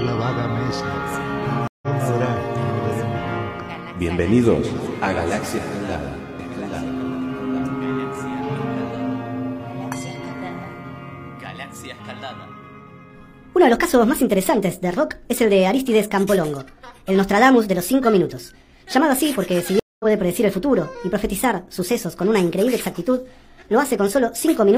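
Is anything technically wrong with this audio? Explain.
Yes. There are two stream reconnects. The first runs from 1.68 to 1.88 s, with a silence of 148 ms. The second runs from 19.80 to 20.05 s, with a silence of 202 ms. Each time the connection dropped and the player went quiet. It then reconnected and started a new decoder mid-stream. The sound picks up roughly a sixth of a second further on. That short stretch of audio is simply skipped.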